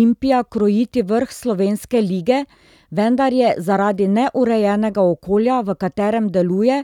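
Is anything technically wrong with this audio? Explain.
No, nothing technically wrong stood out on listening to this speech recording.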